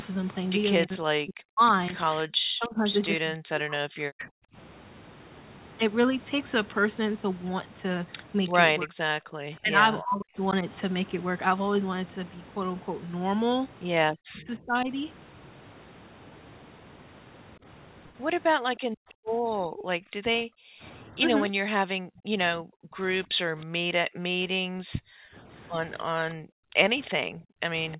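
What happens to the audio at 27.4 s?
At 27.4 s, three call-processing faults overlap. The speech is suppressed in double talk, from 19.84 s to the end. Both sides were talking at once, and the echo canceller likely could not tell the local talker from the loudspeaker echo, so it turned everything down. The voice dips, thins and breaks up, falling by as much as roughly 40 dB.

The background is also gated by the echo canceller, from 24.65 s to 27.60 s. While the far end played through the loudspeaker, the canceller clamped the microphone hard, by about 40 dB. The room sound drops away in patches totalling around one and a half seconds, returning only when the canceller releases.

Echo leak runs from 27.05 s to 27.97 s. Residual loudspeaker pickup likely slipped past the canceller and was sent back. This is heard as a faint copy of the voice, arriving 316 ms late at about 25 dB below the speech.

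Underneath all of this, a DC offset shifts the whole waveform off zero. It cannot be heard directly, but it takes up headroom and leaves steady energy at the very bottom of the spectrum.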